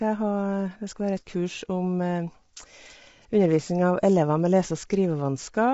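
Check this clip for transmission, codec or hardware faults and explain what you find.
One codec fault runs through the whole speech clip: plainly audible low-delay AAC compression, likely from AAC-ELD at a rate that fits about 24 kbps. Coarse quantisation of each short frame leaves grainy noise between the harmonics. On a spectrogram, the energy stops at 7.7 kHz.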